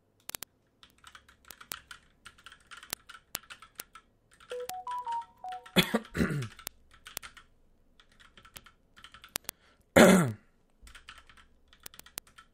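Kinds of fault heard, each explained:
Word clock ticks: The receiving device runs on its own clock, not locked to the sender's digital link, so the clocks repeatedly slip past each other and one sample is dropped or repeated at each slip. Across this recording of everyday sound, sharp ticks recur roughly every 30 ms from 0.11 s to 12.52 s, several hundred in all. That rapid rate points to a clock mismatch on the order of several hundred parts per million.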